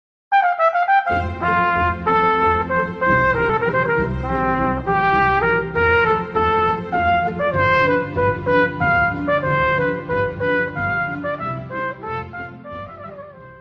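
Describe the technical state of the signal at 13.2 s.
At 13.2 s the signal is intact, with no dropout, distortion or other fault, only the ordinary coding character of the call path it passed through.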